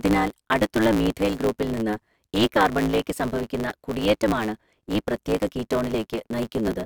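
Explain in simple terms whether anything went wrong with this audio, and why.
Throughout, a block size mismatch (truncated) drops the end of each audio chunk, adding a steady 109 Hz buzz and making the speech run 1.16 times fast.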